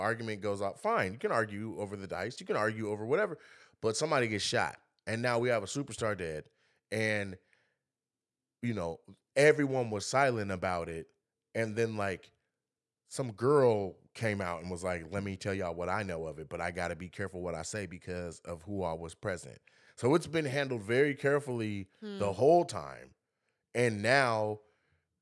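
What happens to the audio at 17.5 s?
Nothing goes wrong at 17.5 s; the speech continues there without any audible dropout, glitch or distortion.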